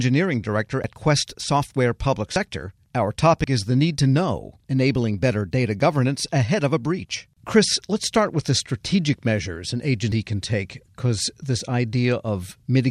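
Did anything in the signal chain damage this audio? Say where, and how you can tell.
Yes. Dropped buffers (overruns) at the driver or buffer stage cause forward jumps at 0.84, 2.36, 3.44 s (before "is the need to") and 10.12 s (between "the strategic measures an" and "can take because this"). About 40 ms is lost each time, roughly a tenth of a second at 10.12 s. No silent gap appears, unlike a dropout, so samples were likely overwritten before being read.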